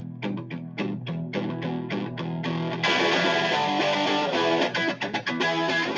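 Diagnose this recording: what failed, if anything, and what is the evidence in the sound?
The failure sits in the call processing: a speech-tuned noise suppressor was left on for the noise suppressor applied to music or sounds. It keeps treating steady parts as noise, so levels pump and swing by around 10 dB while attacks punch through. The band tops out near 8 kHz.

The same suppressor produces sound cut by the noise suppressor from 0.0 to 0.22 s and again from 0.42 to 0.78 s, pulling the sound down by about 6 dB at worst. The gain-riding clamps held material that it mistakes for background and thins it out.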